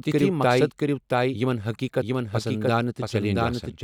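Throughout the speech runs a doubled audio track: a full-band copy about as loud as the original trails roughly 0.7 s behind, dry and without decay, likely from a slower second capture path. Spectrogram and waveform repeat every syllable shape at that fixed offset.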